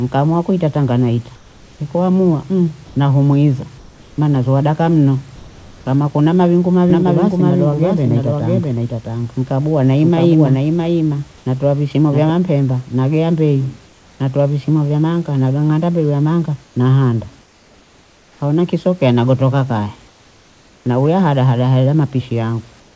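From 1.36 to 1.80 s and again from 3.78 to 4.18 s, the pauses lose their room texture and turn into a flat, even hiss about 5 dB quieter than the surrounding background. The same comfort noise in place of the background returns at 11.38 to 11.46 s at an unchanged level, at 13.86 to 14.20 s about 3 dB down, across a longer stretch from 16.64 to 18.40 s, and from 22.80 s to the end, again about 3 dB down. The likely cause is discontinuous transmission. The sender stops sending during silence, and the receiver generates a synthetic stand-in that lacks the real room's small variations.

At 2.86 to 2.96 s and 5.36 to 5.86 s, the speech itself is cut short and steady noise takes its place, removing roughly 60 ms and 180 ms of sound. This is sound dropped by the voice detector, likely because quiet trailing speech was judged to be background, so comfort noise was played until the detector triggered again.

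From 6.90 to 12.30 s, a doubled audio track appears. A second, somewhat quieter copy of the speech trails around 0.7 s behind, dry and full-band, and switches in and out abruptly. This is likely from the same audio being captured again by a slower path and mixed back in. Throughout, the call codec's band limit leaves nothing above 8 kHz.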